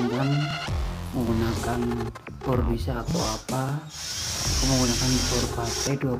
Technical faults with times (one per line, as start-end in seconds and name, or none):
none